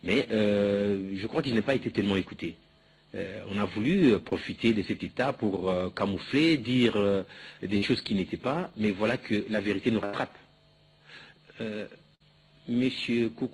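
Audio carried over a call path whose Opus coding leaves content up to about 12 kHz shows two kinds of network fault. One short concealed packet loss runs from 4.29 to 4.33 s. About 20 ms of audio arrived too late for the decoder, and the receiver covered the hole with roughly 18 ms of synthesized continuation of the preceding sound before blending back in. It comes across as a brief smear or wobble. A burst of packet loss occurs three times: 7.77 to 7.92 s, 10.05 to 10.15 s, and 12.15 to 12.22 s. Each time, several consecutive packets went missing, taking out about 40, 80 and 60 ms of audio respectively. The concealer extended the last sound for about 47, 79 and 50 ms, fading it as the gap lengthened, so a held buzz or a dying hiss stands in for the lost stretch. The audio then picks up further along with that portion simply gone. In the first burst a few extra milliseconds were trimmed at the rejoin.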